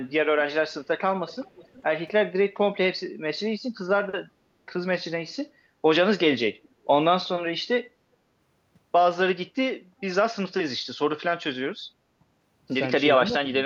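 From 1.27 to 1.83 s, and again briefly from 6.52 to 6.69 s, there's an echo leak: a faint copy of the speech trailing by about 370 ms the first time and 360 ms the second, sitting roughly 25 dB down. It's likely a far-end echo canceller on a loudspeaker letting some residue slip back.

Between 13.18 and 13.49 s the speech dips by about 10 dB in short bites totalling around a tenth of a second. That's speech suppressed in double talk, likely the canceller ducking this talker while the other side spoke too.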